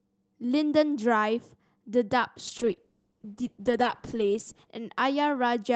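From 2.49 to 4.77 s, a call bitrate drop hits the speech. The encoder starves, likely near 9 kbps, leaving coarse, watery, muffled sound before recovering.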